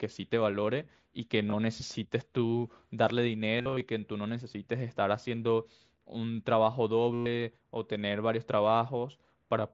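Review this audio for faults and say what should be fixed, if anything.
Concealed Bluetooth headset packet loss occurs at 1.50–1.53 s, 3.58–3.81 s (scattered, longest run 45 ms) and 7.14–7.26 s. The receiver filled missing packets by repeating recent waveform. Unlike a silent dropout, the longer runs hold a buzzy full-level tone, then warble where real speech returns. Keep the headset close to the phone and away from Wi-Fi interference to prevent it.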